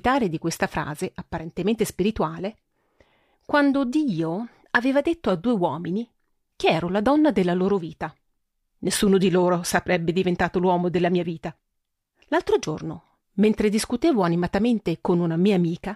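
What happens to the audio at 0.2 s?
Nothing goes wrong at 0.2 s; the audio there plays through intact, with no dropout, click or distortion.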